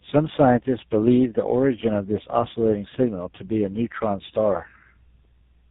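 Speech runs the whole clip through tandem speech coding, with nothing above 3.8 kHz. The rough, muffled, warbly texture comes from one speech coder working on another's already degraded output, which points to an AMR-NB leg and then a GSM full-rate leg bridged through G.711. A single narrowband codec at a similar rate would sound band-limited but cleaner. Here the stacked coding artefacts add graininess and smearing that one pass alone would not produce.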